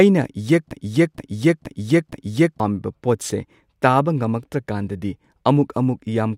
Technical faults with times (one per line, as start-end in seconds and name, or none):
0.71-2.60 broken-record loop